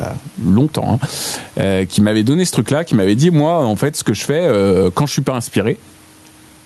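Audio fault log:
throughout, gain pumping: the level swings about 10 dB, ducking under loud speech, likely too much gain into a fast limiter.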